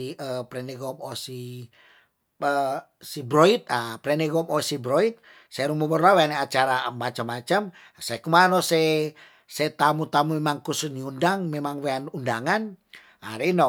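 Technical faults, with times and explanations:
No technical faults can be heard anywhere in this recording.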